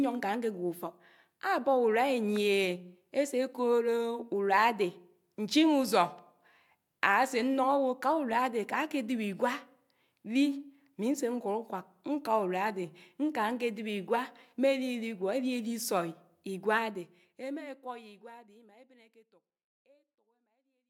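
No technical faults can be heard in this recording.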